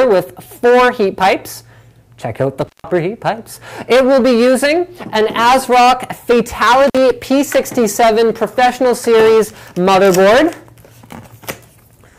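At 2.61 to 2.90 s, intermittent contact cuts the sound out. A loose plug or cable opens the line for about 166 ms, with crackle at both edges. At 6.87 to 6.98 s, it happens again, opening for about 49 ms.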